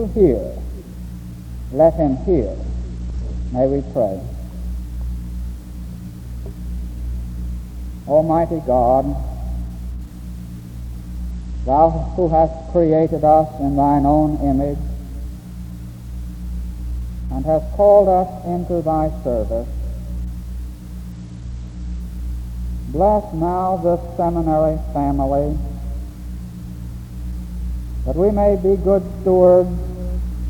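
A Bluetooth SBC bit pool drop occurs three times, at 2.0–3.9 s, 11.3–13.1 s and 21.1–22.0 s. The link appears to fall from a bit pool of 31 to about 11, near 83 kbps. The top sub-bands starve, so the treble dulls and gritty noise rises until recovery.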